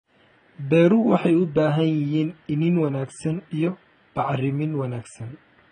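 From start to finish the speech is dull, smeared and fizzy, with nothing above 9 kHz. That's likely heavy AAC compression, consistent with a starved bitrate around 16 kbps.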